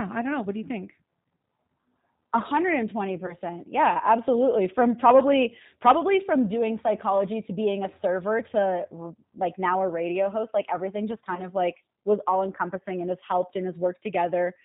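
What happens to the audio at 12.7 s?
G.729 codec coding is present at 12.7 s, as it is across the whole clip. The speech is rebuilt from a vocal tract filter, a pitch predictor and a handful of pulses per 10 ms frame rather than carried as a waveform, and the sparse rendering points to a low rate around 8 kbit/s. The result is plainly audible: speech that stays intelligible but sounds rough and synthetic, with nothing above 4 kHz.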